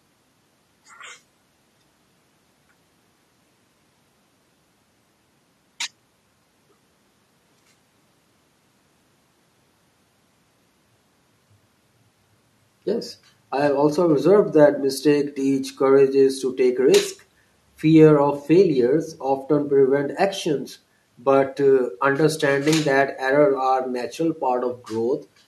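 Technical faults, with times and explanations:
Nothing stood out on listening to this speech recording.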